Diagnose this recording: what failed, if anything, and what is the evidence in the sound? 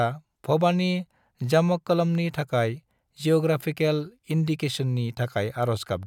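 Nothing failed in this recording; the speech carries no audible sign of trouble at any stage. There is no evidence in the sound that points to a fault in the chain, from capture through to playback.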